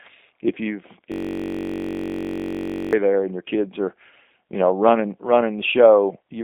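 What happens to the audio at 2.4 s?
At 2.4 s the audio is caught in a system hang loop. It runs from 1.12 s, just after "if you've", to 2.93 s, before "there and your kids". The machine froze while the sound hardware kept replaying one 21.33 ms piece, which fits a 1024-sample buffer. That piece repeats dozens of times at 46.9 Hz, so it sounds like a steady, rough buzz.

The sound also carries G.729 codec damage, present throughout the clip. The codec rebuilds speech from a filter model, a pitch predictor and sparse pulses, which fits 8 kbit/s. Nothing passes above 3.8 kHz. The band sits at roughly 250 Hz to 3.7 kHz, and the result sounds plainly rough and synthetic.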